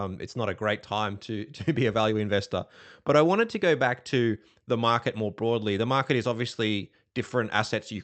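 Clock drift between sender and receiver runs through the whole speech clip. The sending device's clock runs roughly 4 percent fast compared with the receiver's, so audio arrives a little quicker than it is played out. The jitter buffer keeps filling, and the receiver has to throw away small slices of audio to keep the delay from growing. The result is a faint, uneven stumble in the timing rather than a clean, steady flow.

Repeated timing corrections, from 0.27 s to 7.76 s, are how that surplus gets removed. The receiver keeps trimming short pieces so playback keeps pace with material arriving at 104 percent speed. Every cut goes the same way, shortening the audio, but they land at irregular intervals. Each one is small. Together they make the pacing feel slightly unsteady and jerky, with brief hiccups where a fragment has been skipped. The sound passed through an Opus call path whose bandwidth tops out at 8 kHz.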